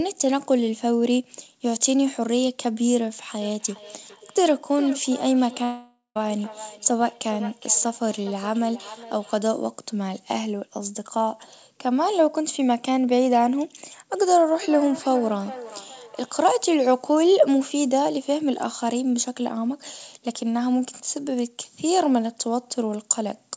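Feedback echo between two devices runs from 3.41 to 9.38 s: a second device in the room replays the speech, the original microphone picks it up again, and the words return about every 0.4 s, thin and ringing, peaking at about 17 dB below the speech. From 5.64 to 6.17 s the speech breaks into a fading buzz and then roughly 0.15 s of silence, with about half a second missing when it resumes, likely a long network dropout. The feedback echo between two devices returns from 14.15 to 16.49 s, again repeating about every 0.4 s and reaching about 15 dB below the speech.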